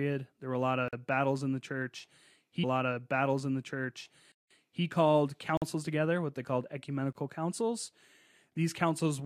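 At 0.88 s there's a 46 ms block of digital silence, a hard dropout that fits a 2048-sample buffer going unfilled. From 2.63 to 4.83 s, right after "battles in the church", a stream segment is repeated: the player queued the same stretch twice, adding about 2 s with a blip at the jump back. Inside that, after "battles in the church" again, a longer 186 ms gap at 4.32 s leaves an audible hole. More blocks of digital silence come at 5.57 s (46 ms) and 7.13 s (27 ms, just after "together what they called").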